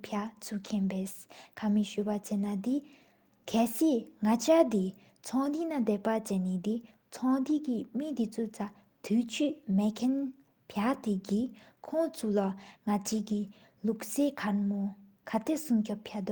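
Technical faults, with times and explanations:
Nothing to flag here; there are no technical faults anywhere in this speech recording.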